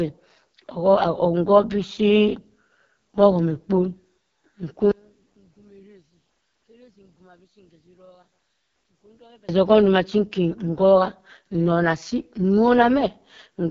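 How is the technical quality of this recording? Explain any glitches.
Technical quality is poor, with one fault running the whole way through. From start to finish this speech carries heavy AMR wideband (HD Voice) codec damage. Nothing comes through above 7.2 kHz, and the rough, raspy grain points to the codec's lowest 6.6 kbit/s mode, where the pulse-driven vocal tract model is starved of bits and the top band is just shaped noise.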